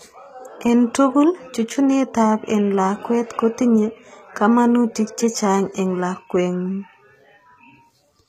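From start to finish the speech has the marks of low-bitrate HE-AAC compression, likely at a rate around 20 kbps. The treble is not carried directly but rebuilt from copies of lower bands, so s sounds come out gritty and metallic, with brightness that doesn't match the body of the voice. The damage is plainly audible throughout, and the spectrum stops dead at 14.8 kHz, with nothing above it.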